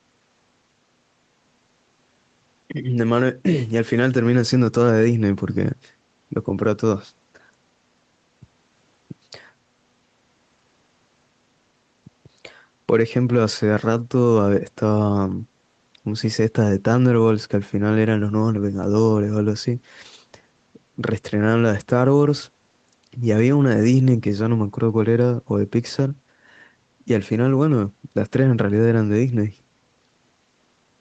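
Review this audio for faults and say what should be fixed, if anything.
No faults; nothing needs fixing.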